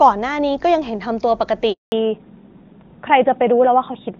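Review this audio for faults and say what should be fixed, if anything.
The call was handed over from one network to another, and for 200 ms, from 1.72 s to 1.92 s, no speech frames reached the receiving end. This handover gap sounds like the speech fading out within a few tens of milliseconds and then dead silence until the new link picks up at 1.92 s. Whatever was said during those 200 ms is simply missing. To prevent it, the handover should be made before the old link is released, so that frames keep flowing during the switch.

Right after the handover, the call did not return to HD Voice but fell back to a narrowband codec. This fallback to narrowband lasts from 1.92 s to the end. Before it, the speech is clean and wideband, with at most faint coding damage, which fits AMR-WB at its top rate of 23.85 kbit/s. After it, nothing above 4 kHz remains, which points to AMR-NB at about 12.2 kbit/s. 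The speech turns duller and rougher, and sibilants lose their crispness. To prevent it, the target network should be set to negotiate and keep AMR-WB after handover rather than dropping to the narrowband codec.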